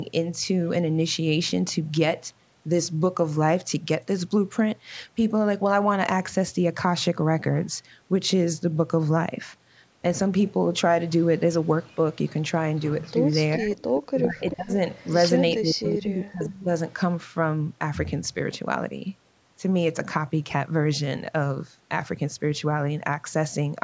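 A likely echo leak, where a far-end echo canceller let part of its loudspeaker playback back into the microphone, appears first from 11.86 to 12.79 s. A copy of the speech returns about 392 ms late at a very faint level, around 35 dB under the talker. From 13.73 to 15.13 s and again from 15.83 to 16.94 s the same 392 ms echo returns much stronger, only about 15 dB down.

Those stronger echoes overlap speech suppressed in double talk. With both sides active, the canceller likely could not tell the local talker from the returning echo and attenuated everything. From 13.57 to 14.78 s the talker dips by up to roughly 25 dB over about 0.7 s in total. From 15.56 to 16.7 s the cuts go deeper, near 40 dB, across roughly a second.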